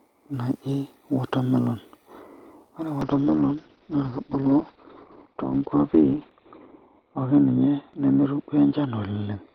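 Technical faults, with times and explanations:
3.03 s to end, call bitrate drop: encoder got starved, so the speech turns rough and muffled above 4 kHz, which fits roughly 7 kbps.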